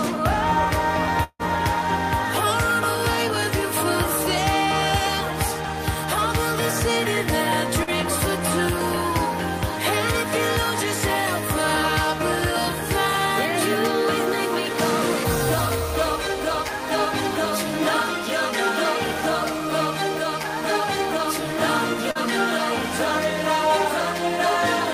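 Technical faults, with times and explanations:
1.23 to 1.42 s, long network dropout: about 160 ms of audio is gone. The last sound is stretched into a fading buzz or hiss, then roughly 50 ms of silence follows before the audio resumes without the lost part. This is likely a stall in packet delivery.
7.83 to 7.90 s and 22.11 to 22.18 s, short concealed packet loss: each time, 40 ms never reached the decoder. The receiver bridged the gap by extending the preceding sound and blending back into the real signal, so each sounds like a brief smear or wobble.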